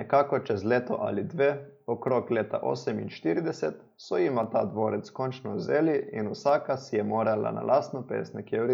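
Three sharp clicks cut through the speech, at 2.08 s, 4.44 s and 6.49 s. The first falls just before "leta oseminštirideset so jima". The second sits before "ta dvorec končno vzeli". The third comes right after "dvorec končno vzeli in". Each is most likely dropped samples. A fraction of a millisecond of audio goes missing, so the waveform jumps abruptly to a later value. Nothing audible is lost. Each jump is heard as one brief click.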